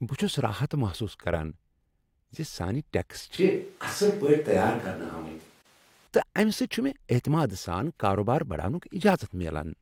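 A speech recording where the close microphone's signal likely dropped out and a more distant pickup took over, from 3.38 to 6.07 s, right after "زِ سانہِ ٹیکس". The switch to a distant microphone makes the sound abruptly roomy and hollow, thinner in the bass, with more background noise, roughly 35 dB below the speech, while the overall level barely changes, and it snaps back just as suddenly. Inside that stretch, separately encoded pieces were joined without trimming the encoder's start delay and end padding, leaving a gap at a join of encoded pieces from 5.62 to 5.65 s. It is a 33.5 ms gap with smeared edges, after which the sound resumes where it stopped. Its position fits pieces cut every 6.0 s.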